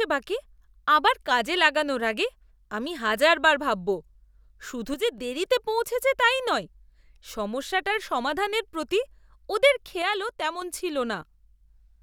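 From 4.94 to 5.18 s, before "দেরিতে পৌঁছেছে তাই নয়", and 10.02 to 10.62 s, after "সমস্যাটার সমাধানের প্রতি ওদের", the speech abruptly falls about 6 dB, likely one channel dropping out before the mono sum.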